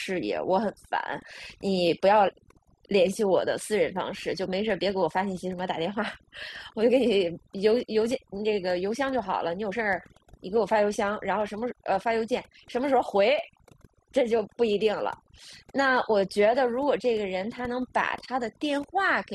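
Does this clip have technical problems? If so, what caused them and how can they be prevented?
Yes, overdone noise removal runs through the whole clip: gaps fall to near silence with twinkling specks. An over-aggressive reduction setting is gating individual frequency bands near the noise level, taking quiet parts of the voice with them. Back the reduction amount off and check the result by ear before committing it.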